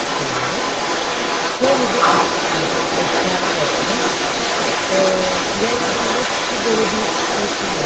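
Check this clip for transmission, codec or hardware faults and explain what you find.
A second voice runs under the main speech for the whole recording, from 0 to 7.85 s, at about the same loudness as the talker. The fault is the other side's voice leaking through, most likely because the talker's device played the other side through a loudspeaker and the echo canceller let much of it back into the microphone. On a spectrogram, two overlapping sets of harmonic stripes appear throughout. Everything sits below 8 kHz, consistent with a low-bitrate Opus call path.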